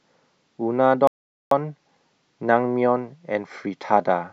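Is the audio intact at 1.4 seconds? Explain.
No. At 1.4 seconds the speech sits inside a playback stall lasting from 1.07 to 1.51 s, about 0.44 s of silence that cuts the sound off mid-flow. The likely cause is the player running out of buffered data or its thread being blocked.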